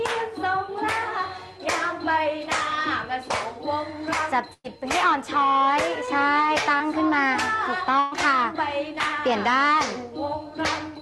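At 4.53 to 4.66 s there is a burst of packet loss. Audio arrived too late or not at all. The receiver stretched the last sound for 107 ms, fading it, with 30 ms of silence. Playback resumes 100 ms further on.

Short concealed packet loss follows at 6.06 to 6.09 s and 6.77 to 6.82 s. Each time 20 ms never reached the decoder. The gap was patched by extending the previous sound, 12 ms and 25 ms, then blended back. Each is a brief smear.

At 8.00 to 8.14 s a second burst of packet loss occurs. Here 118 ms of continued, fading sound replaces the gap, with no silence. About 120 ms of audio is skipped before playback picks up again.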